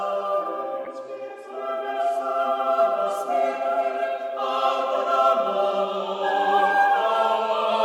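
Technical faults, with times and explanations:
Throughout: sample clock jitter. The converter's clock wanders by something like a microsecond or two. Each sample lands slightly early or late. Steep, loud, bright passages of the music suffer most. A faint hiss or grit rides with them, around 40 dB below the music.
0.83 to 0.88 s: damaged data in a compressed stream. A short stretch of the encoded music is corrupt. The decoder misreads those frames and loses its footing before resyncing. The result is a brief chirp or blip cutting across the music.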